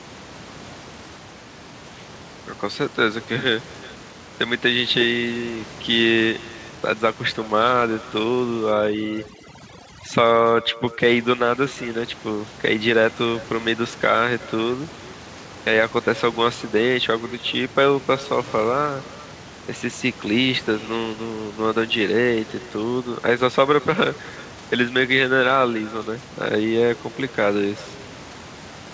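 Nothing on the far end removes its own loudspeaker output, so this is echo with no canceller: the far side's microphone picks up the call audio and sends it back, and it runs for the whole clip. Every phrase is trailed by a faint, hollow copy arriving roughly 0.4 s later at about 22 dB below the direct speech. The copy shares the same band as everything else, stopping at 8 kHz, which fits a G.722 wideband call path.

From 8.72 to 11.00 s, overdone noise removal sets in: a noise suppressor working far too hard decides that the room noise, which otherwise sits about 18 dB under the speech, must go, and it clamps individual frequency bands down along with the quieter parts of the speech. For those two seconds the background drops to near silence sprinkled with twinkling specks before the room sound returns.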